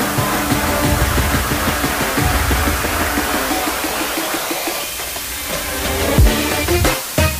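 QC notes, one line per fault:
Throughout: low bit depth with dither. A constant, even hiss sits only about 5 dB below the sound, which fits a 4-bit signal with dither added before rounding. The dither turns the coarse rounding error into steady white noise that doesn't follow the sound. That is what separates it from undithered low bit depth, which gives gritty distortion that rises and falls with the sound and vanishes in quiet moments. Here the hiss stays constant and nothing sounds distorted.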